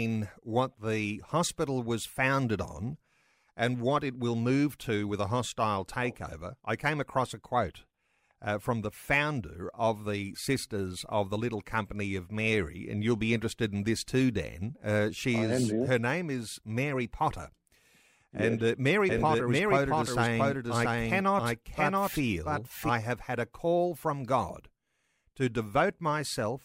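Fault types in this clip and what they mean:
Doubled audio track: from 19.09 to 22.89 s, just before "have had a call", the speech runs twice, a second full-band copy trailing by roughly 0.7 s at about the same level, with no reverb tail. It starts and stops abruptly, likely from an editing overlap. A spectrogram shows harmonic patterns repeated at a fixed offset, and the waveform shows overlapping envelopes.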